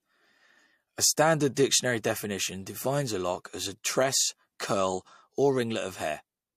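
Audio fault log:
1.55–1.57 s, pre-echo: a hiss about 18 dB above the quiet floor rises for roughly 21 ms just before a sharp speech attack, which lands soft and smeared. The codec spread its quantisation noise across a transform block, which fits a window near 36 ms, and seems not to have switched to short blocks for the transient. Unlike reverberation or an echo, the smear comes before the onset, not after it.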